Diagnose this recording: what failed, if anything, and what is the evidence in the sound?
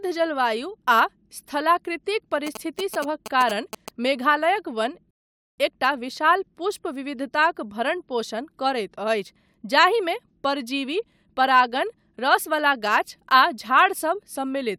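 In the analogue wiring, a nearby 2G phone was exchanging signalling with its network, and the audio circuit rectified its radio bursts into the signal path. From 2.47 s to 3.89 s this gives the GSM signalling bursts' galloping dit-dit-dit of short buzzes at a 217 Hz repetition rate, sitting roughly 10 dB below the speech. Because the phone only sends short groups of bursts while signalling, the interference arrives in clusters rather than as a steady drone.

At the network and playback stage, the player drained its buffer of downloaded audio and had to wait for more, producing a rebuffering stall. At 5.11 s the speech cuts to silence and picks up again at 5.58 s exactly where it left off. No audio is missing, but the gap adds about 0.47 s to the running time and breaks the flow of the speech.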